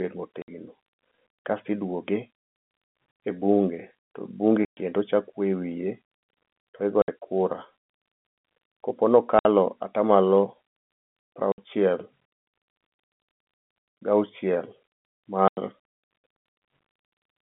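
Packet loss filled with silence breaks up this telephone-band speech: lost packets were replaced by dead air, cutting hard-edged holes at 0.42, 2.85, 4.65, 7.02, 9.39, 11.52 and 15.48 s, lasting 60, 90 or 120 ms, which fits 30 ms packets.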